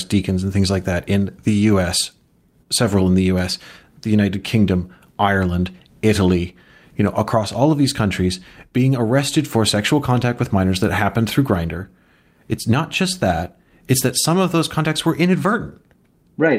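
No technical faults can be heard anywhere in this speech recording, and the signal holds steady throughout.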